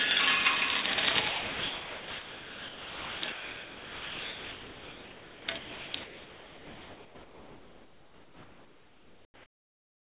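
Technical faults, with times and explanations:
0.82–0.84 s, 0.94–0.98 s, 1.28–3.22 s, 3.32–5.48 s, 5.58–5.94 s and 6.04 s to the end, sound dropped by the voice detector: each span gives way to steady comfort noise, two brief gaps of 20 and 40 ms, then about 2 s twice, 0.36 s, and finally the last 4 s. The likely cause is a sender-side detector treating the sound as background and stopping transmission, with the receiver filling in generated noise until the detector triggers again.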